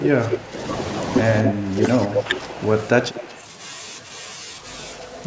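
From 0.00 to 0.63 s and again from 1.42 to 1.88 s, the speech dips by about 15 dB, sounding pushed back and partly cut away. From 2.07 to 2.57 s it sinks more gently, by about 5 dB. This is speech suppressed in double talk. The likely cause is both sides talking at once, so the echo canceller could not tell this talker from the returning loudspeaker sound and turned the shared signal down.

Overlapping that last dip, from 2.14 to 2.23 s, a delayed copy of the speech arrives roughly 226 ms late and about as loud as the original. A weaker copy follows from 2.87 to 3.41 s, well below the speech and 231 ms behind. A faint trace appears from 4.97 s to the end, 241 ms behind. This is echo leak, likely from a loudspeaker on the far end whose canceller let part of the picked-up sound pass back into the call.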